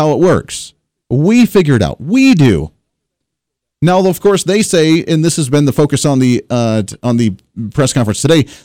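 Hard clipping runs through the whole speech clip. The signal was driven about 8 dB past what the converter or an earlier stage could pass, so roughly 3 percent of samples hit the ceiling and are cut flat, giving distortion on the loud peaks.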